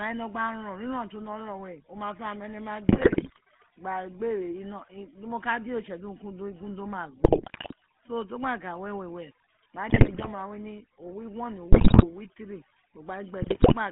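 Throughout, the speech passes through the GSM full-rate codec, which fits a 13 kbps stream. The band runs only from about 150 Hz to 3.4 kHz. The voice sounds buzzy and gravelly.

Overdone noise removal also runs throughout. Bands near the noise estimate are pushed down hard. The background drops and breaks up into twinkling specks.

GSM bit errors strike at 2.88–3.39 s, and at 7.24–7.74 s, between "do ma" and "so to". They recur at 9.90–10.28 s, before "we ni", then at 11.72–12.05 s and 13.42–13.74 s. Corrupted decoder values bend the spectrum and level. Each burst squawks, pops and gargles.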